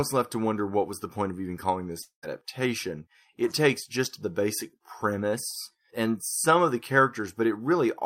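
Just after "point of even calling", 2.01 to 2.25 s, sound smears into a fading buzz, then silence: likely a long network dropout losing about 220 ms.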